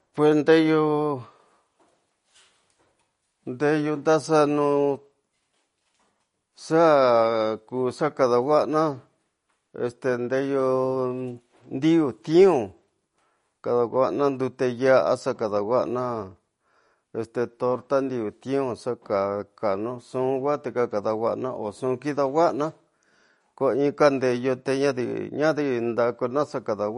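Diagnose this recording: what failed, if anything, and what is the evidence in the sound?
Codec stage, throughout: the speech stops dead above 10.6 kHz and swirls audibly, likely MP3 compression starved of bits, which fits about 40 kbps.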